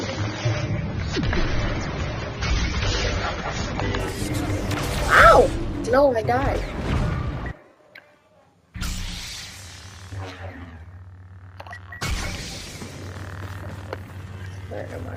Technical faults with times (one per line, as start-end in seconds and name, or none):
0.00-4.00 adaptive stream starting at a low bitrate